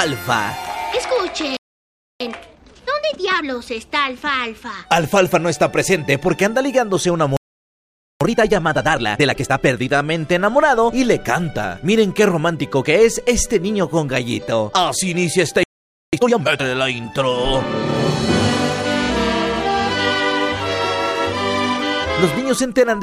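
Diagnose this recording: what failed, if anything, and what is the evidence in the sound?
Playback is where it goes wrong: three playback stalls, with the sound cutting out mid-flow at 1.57 to 2.20 s, 7.37 to 8.21 s and 15.63 to 16.13 s, silent for about 0.64, 0.84 and 0.50 s. Most likely the player's buffer ran dry or its thread got blocked.

Right after each gap you get time-compressed catch-up: 2.20 to 3.46 s and 8.21 to 9.89 s run at 1.5 times speed, and 16.13 to 16.61 s at 2 times. The player is cutting and cross-fading small slices to work off the backlog, so the audio sounds hurried at normal pitch.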